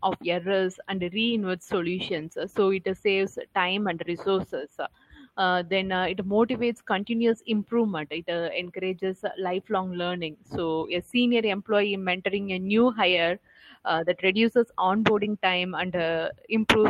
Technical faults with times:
none

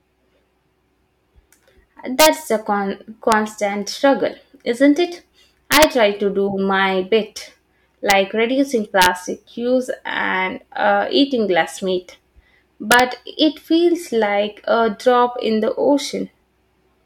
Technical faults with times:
2.20-2.26 integer overflow
3.32 integer overflow
5.72-5.84 integer overflow
8.10 integer overflow
9.02-9.06 integer overflow
12.92-13.00 integer overflow

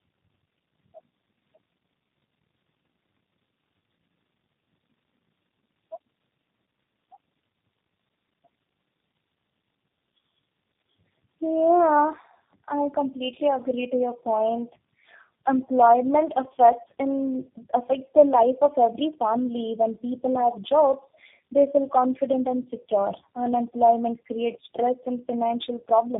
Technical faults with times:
0.00-26.20 tandem speech coding

